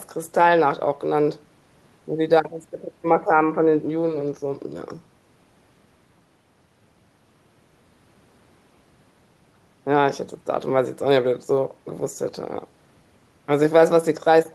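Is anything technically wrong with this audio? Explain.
No, nothing stood out as technically wrong when listening to this speech recording.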